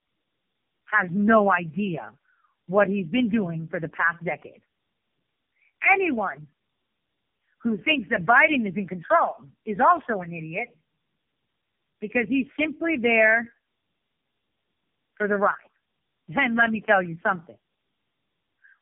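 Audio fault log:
Throughout: tandem speech coding. The speech went through three low-rate AMR-NB stages in a row, at 7.95, 6.7 and 6.7 kbit/s, with G.711 hops between them. Each stage re-encodes the last one's damage, so it comes out rough, warbly and muffled, with nothing above 3.4 kHz.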